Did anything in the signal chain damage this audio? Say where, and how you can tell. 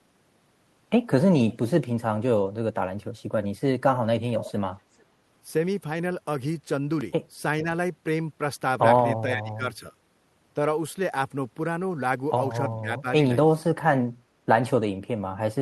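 Yes, in call processing. An echo leak appears at 1.5–1.57 s, 4.4–4.52 s and 5.0–5.04 s: faint delayed copies trailing the speech by 433 ms, about 20 to 40 dB down. This is likely a far-end echo canceller passing residual loudspeaker pickup back down the line.

Speech suppressed in double talk shows as level dips at 7.63–7.67 s, 9.34–9.93 s, 12.81–13.06 s and 13.59–13.77 s, ranging from a slight drop to roughly 25 dB at the deepest. The likely cause is the echo canceller mistaking overlapping talk for echo and attenuating the wanted speech along with it.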